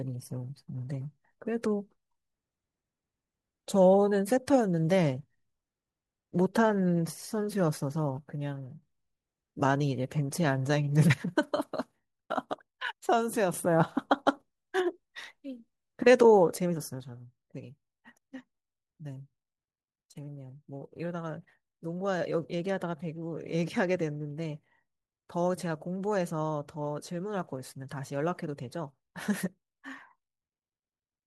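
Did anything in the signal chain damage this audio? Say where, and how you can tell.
Yes. The speech drops abruptly by about 6 dB three times: 8.19 to 8.83 s, 11.14 to 13.54 s, and from 17.0 s to the end. This is one channel dropping out, most likely from an intermittent analogue connection on one side of a stereo feed that is later summed to mono. Each step is instantaneous and exactly half the amplitude, with no ramp and no silence, which rules out gain riding, compression or a full dropout.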